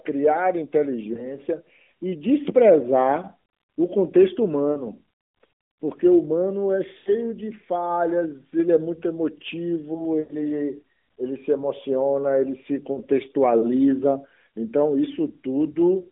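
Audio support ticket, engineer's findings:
Lost AMR speech frames at 1.14–1.37, 4.72–4.88, 6.98–7.10, 10.20–10.33 and 12.92–13.00 s. Spans of 20, 40, 80, 100 and 40 ms, each a whole number of 20 ms frames. Decoder repeats the last pitch and vocal-tract shape while the level falls: a smeared, fading warble, not hard silence or clicks as from dropped samples. Recovery rough briefly. Narrowband path (200 Hz to 3.6 kHz) is working normally, with light codec damage.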